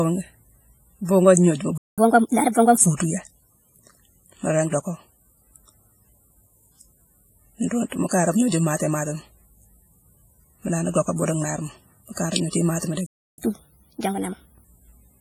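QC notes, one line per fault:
Throughout: WMA compression, heavy codec damage, with ringing, washy smearing and hiss that breathes with the signal, likely from a low-bitrate transform codec near 24 kbps.
1.78–1.98 s and 13.06–13.38 s: playback stall, the audio drops to silence for about 0.2 s and 0.32 s, likely from the player running out of data, then resumes where it stopped.
1.98–2.78 s and 13.38–14.64 s: catch-up at higher speed, the backlog is played 1.25 times fast by resampling, raising pitch by about four semitones before settling back to normal.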